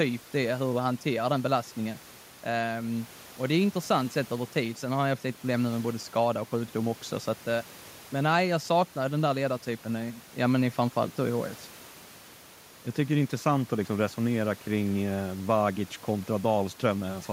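Nothing stood out on listening to the speech, with only the room's own background noise sitting well below it, about 22 dB down.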